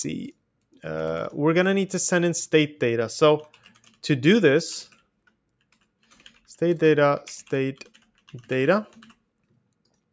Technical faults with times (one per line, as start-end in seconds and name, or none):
3.54-3.96 sound cut by the noise suppressor